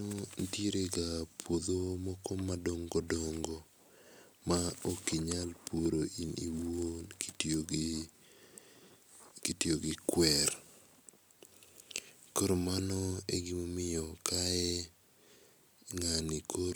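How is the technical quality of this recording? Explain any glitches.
No glitches or technical faults can be heard here.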